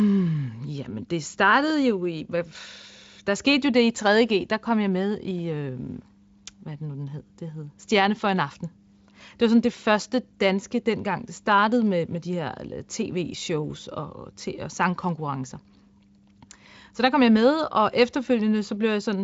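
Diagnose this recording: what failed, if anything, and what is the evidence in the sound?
Nothing in this recording has failed: the speech runs through a Speex stage whose sound points to a high-quality setting, with little or no audible coding damage and content stopping at about 7.6 kHz, as that codec's wideband mode would give.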